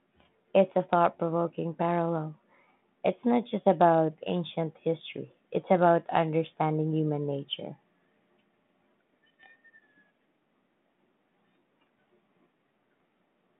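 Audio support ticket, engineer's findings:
Bit errors on an ADPCM link: pops with rough, uneven bursts at 9.43–9.51 s and 12.96–13.02 s. Flipped bits knock the decoder's step size and predictor off, so each error rings briefly. Waveform shows spiky level jumps; spectrogram shows short broadband smears inside the 150 Hz to 3.6 kHz telephone band, which fits a 32 kbit/s G.726 path.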